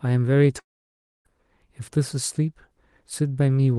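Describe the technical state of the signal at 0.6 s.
At 0.6 s the audio breaks off into a long network dropout running from 0.59 to 1.27 s, likely caused by packets that never reached the receiver. The last sound is stretched into a brief fading buzz, then near-silence for most of the gap, and speech resumes with roughly two-thirds of a second missing rather than delayed. That length and the lost material set it apart from a short packet-loss glitch, which the concealment would smooth over almost unnoticed.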